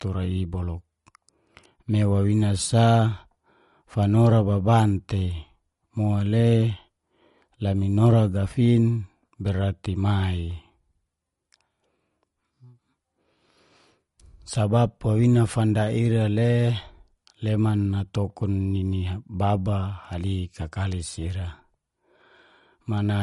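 MP3 compression damage runs throughout this speech clip, from start to finish: nothing survives above 11.2 kHz, and the plainly audible watery, swirling texture on s sounds points to a low bitrate in the region of 48 kbps. With too few bits to go around, the encoder has likely chopped off the treble at a fixed frequency and discarded weaker frequency components, which then flicker in and out between frames and smear the attacks of consonants.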